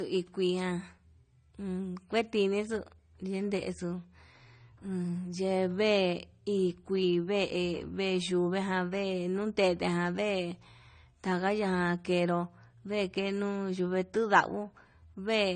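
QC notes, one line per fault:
Throughout: transcoding between lossy codecs. The speech has nothing above 9 kHz and two kinds of smeary, swirly artefacts layered together. That's likely an MP3 at about 64 kbit/s re-encoded to AAC-LC near 32 kbit/s, with the second encoder spending bits on the first one's damage.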